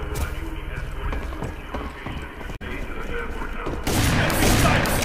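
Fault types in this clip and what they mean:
Damaged data in a compressed stream: a brief glitch from 2.52 to 2.62 s, about 0.1 s long, where corrupted frames made the decoder misread the data, lose sync and hunt for the next valid frame header before playback resumed.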